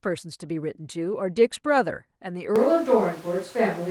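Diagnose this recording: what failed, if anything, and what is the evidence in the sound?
At 2.56 s the speech turns suddenly roomy and hollow, with thinner bass and room noise rising to roughly 25 dB below the voice, though overall level barely changes. This persists to the end. The capture stage likely switched to a distant microphone after the close one dropped out.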